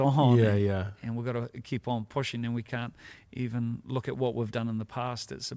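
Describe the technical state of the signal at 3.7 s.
At 3.7 s the receiver's jitter buffer is in a slow-down, from 3.27 to 3.73 s. To build up a reserve, it repeats single pitch periods or bits of pauses to add about 36 ms. The speech plays at 94% speed at unchanged pitch, slightly drawn out.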